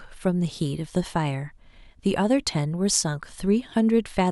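No technical fault can be heard anywhere in the recording, and the signal stays intact and continuous throughout.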